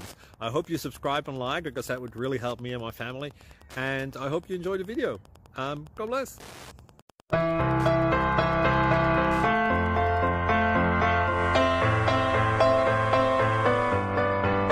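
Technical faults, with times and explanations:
0.0–10.30 s Wi-Fi interference: a nearby Wi-Fi radio's beacon, repeating every 102.4 ms, is being picked up and rectified by the audio circuit, so a steady ticking of about ten per second runs underneath the sound, roughly 30 dB below it.
11.22–14.15 s digital radio blending to analogue: the receiver lost its digital signal and cross-faded over 233 ms to the FM broadcast of the same station. Hiss rises to around 30 dB below the sound, and the level shifts by about 1 dB.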